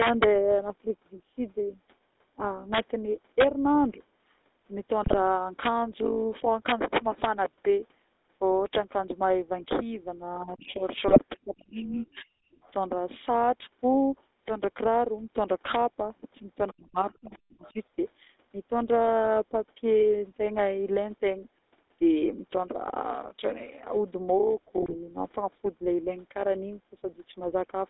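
The GSM full-rate codec shapes the whole recording. The speech is confined to roughly 250 Hz to 3.7 kHz and carries a steady buzzy, gravelly roughness, which fits the 13 kbps pulse-excited coder. Unlike a wideband codec, this coder leaves the speech coarse all through rather than just dull.

Integer overflow first appears at 0.02 to 0.24 s. It recurs at 2.74 to 2.79 s, 3.40 to 3.43 s, 5.66 s and 6.69 to 7.24 s. Peaks driven about 1 to 3 dB past the limit wrap to the opposite sign, so loud sounds crack violently. This is harsher than clipping, which only flattens the peaks.

GSM bit errors hit at 5.02 to 5.15 s, 11.08 to 11.19 s and 24.80 to 24.95 s. Corrupted filter, pitch and gain values in a few frames turn the speech into short squawks and gargling. The damage is a garbled spectrum rather than a sign flip.

Speech is suppressed in double talk at 10.44 to 10.84 s, 11.45 to 12.58 s and 16.72 to 17.76 s. 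The talker's level dips by up to about 40 dB or drops out in pieces. This is likely an echo canceller ducking while both sides spoke.

The other side's voice leaks through faintly at 12.16 to 12.23 s, 12.63 to 12.72 s, 16.68 to 16.72 s and 17.31 to 17.73 s. It sits about 25 to 35 dB below the speech. That is likely residual loudspeaker echo the canceller missed, not crosstalk from another line.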